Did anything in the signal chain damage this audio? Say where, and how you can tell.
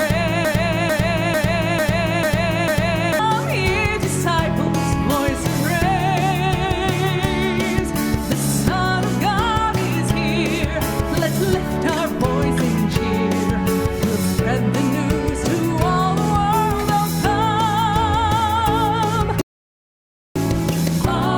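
Yes. From 0.45 to 3.19 s, a 0.45 s fragment repeats exactly six times back to back, a broken-record loop. The playback buffer likely stalled and kept resending its last block, losing the audio meant for that span.

At 4.67 to 4.69 s a single sharp loud pop jumps about 10 dB above the sound, which continues underneath. It is likely a voltage step in the analogue wiring, from a plug or switch.

From 19.41 to 20.36 s the sound drops to silence, then resumes exactly where it stopped. This rebuffering stall in network playback adds 0.94 s but loses nothing.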